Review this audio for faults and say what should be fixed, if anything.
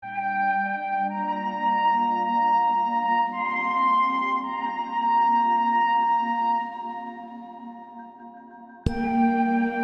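Nothing in this music needs fixing. No faults can be heard anywhere in the recording, so there is nothing to prevent.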